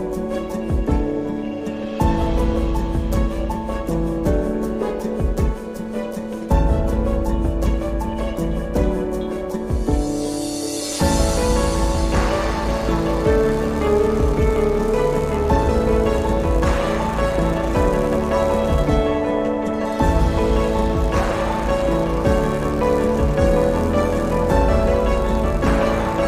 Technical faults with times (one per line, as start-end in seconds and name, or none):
0.00-26.28 overlap-add ripple